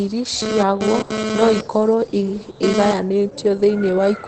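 The speech clip carries Opus voice compression from start to finish. Nothing comes through above about 8.6 kHz, consistent with the wideband SILK mode, where a linear-prediction coder models the voice and quantises its excitation coarsely. The damage is plainly audible: the voice sounds muffled and hoarse with a slightly robotic edge, which fits a low bitrate of around 12 kbps.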